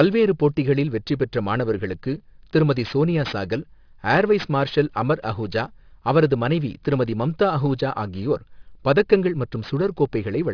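Aliasing runs throughout: energy above 5.5 kHz folds back as faint metallic grit on sibilants, fitting an unfiltered drop to 11 kHz, unlike muffled band-limiting.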